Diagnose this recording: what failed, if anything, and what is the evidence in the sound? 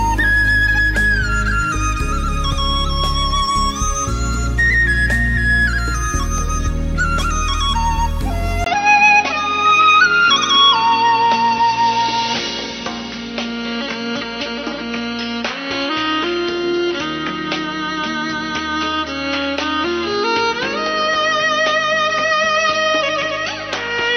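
At 8.64 s the sound drops out for about 20 ms. Afterwards it stays dull to the end, with nothing above 6.1 kHz. A new, faint background noise appears, but the level holds steady. This points to the driver stage, likely an input switched to a poorer device.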